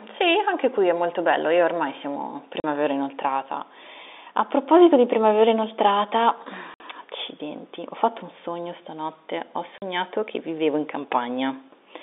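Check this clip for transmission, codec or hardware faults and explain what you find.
The speech has one transmission fault, packet loss filled with silence, heard through a G.711 telephone-band path of roughly 300 Hz to 3.7 kHz.

Packet loss filled with silence: at 2.6 s (40 ms), 6.74 s (60 ms) and 9.78 s (40 ms), missing packets become hard-edged gaps of true silence. The lengths are multiples of 20 ms, which fits 20 ms packets. Concealment would instead smear or repeat the sound.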